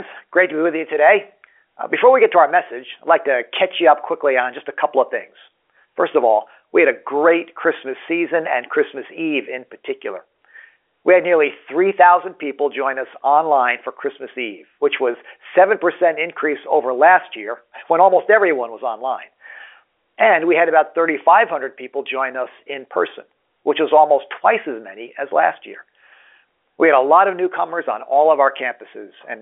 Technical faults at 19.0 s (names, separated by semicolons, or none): none